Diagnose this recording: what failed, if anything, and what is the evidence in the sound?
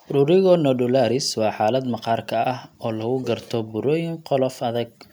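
Nothing in this speech recording points to a failure at any stage of the chain. No stage shows evidence of a fault, so there is nothing to diagnose.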